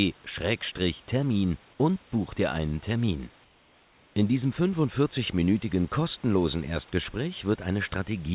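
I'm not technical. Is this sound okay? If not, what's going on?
No. From 3.44 to 4.16 s the room's background becomes a flat, slightly quieter hiss, likely comfort noise in place of the background: the call paused sending and filled the gap with artificial noise.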